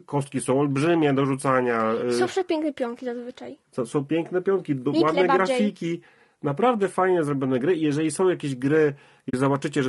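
A speech recording, its voice rough and grainy throughout, with noise filling the gaps between harmonics and a thin, synthetic-sounding top band. This is low-delay AAC compression, likely AAC-ELD at a rate around 32 kbps. Near the end, from 9.29 to 9.34 s, there is AAC frame loss with muting: a 40 ms gap, consistent with two lost frames zeroed by the decoder. The overlapping windows fade it out and back in, unlike a hard dropout.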